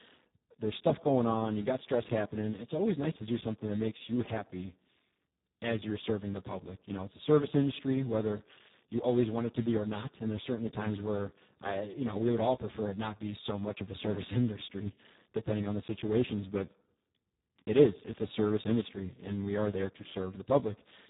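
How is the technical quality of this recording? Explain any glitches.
Poor: the speech sounds hoarse and noisy from start to finish, with nothing above 3.8 kHz. This is heavy Speex codec damage. The damage fits a very low setting, around 4 kbps, where this CELP coder has so few bits for the excitation.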